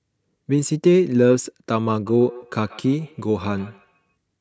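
This speech clip has feedback echo between two devices from 2.06 to 4.15 s. The speech returns at a fixed gap of roughly 150 ms, about 23 dB below the direct sound. That steady spacing separates it from room reverberation, which smears evenly instead of repeating at a set interval.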